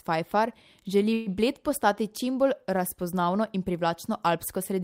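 A speech recording whose sound briefly hangs at 1.13 s, the last instant stretched into a fading buzz or hiss for about 130 ms until 1.28 s. Speech then resumes exactly where it stopped, with nothing lost but everything after running about 130 ms later. This is a call audio freeze, likely from delayed packets draining the jitter buffer.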